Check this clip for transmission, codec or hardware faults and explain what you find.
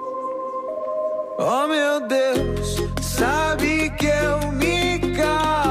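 Nothing in the signal points to a transmission, codec or hardware problem: the audio is continuous, with no gaps, distortion or interference at any point.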